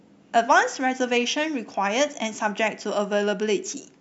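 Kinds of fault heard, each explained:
Nothing here stands out as a technical fault; the speech comes across steady and intact all the way along.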